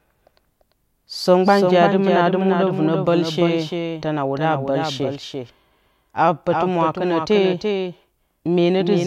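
From start to finish the speech carries a doubled audio track: a second full-band copy trails about 300 ms behind, maybe 5 dB quieter, with no decay or room colour. It's likely a second capture through a slower path, or two misaligned copies in the edit.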